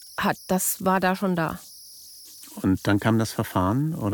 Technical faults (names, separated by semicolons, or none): converter idle tones